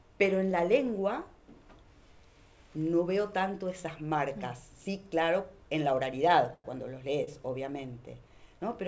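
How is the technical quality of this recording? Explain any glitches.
The recording has two timing glitches near the end, carried over a call path whose G.722 coding leaves nothing above 8 kHz on a spectrogram.

From 6.54 to 6.66 s there is a call audio freeze: the last sound continues as a fading buzz and drops into about 30 ms of silence before resuming. The likely cause is a jitter buffer that ran empty. The waveform shows a decaying tail and then a flat gap.

At 7.24 s a short stall from a late packet holds the current sound about 29 ms too long. On the spectrogram this appears as briefly smeared, stretched bands with a slight dip.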